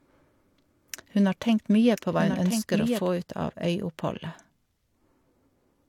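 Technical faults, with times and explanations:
0.0–3.08 s, doubled audio track: the speech is heard twice, with a second full-band copy about a second behind and a few dB quieter, dry and without room colour, already running at the start and cutting off abruptly. Likely a slower second capture path mixed in.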